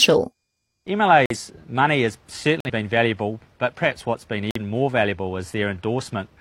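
Corrupt frame muted at 1.26 s, 2.60 s and 4.51 s: damaged compressed frames were rejected by the decoder and replaced with silence, leaving abrupt gaps of about 0.12 s, 0.10 s and 0.10 s. The first gap fits two lost frames, the others one each, with timing unchanged afterwards.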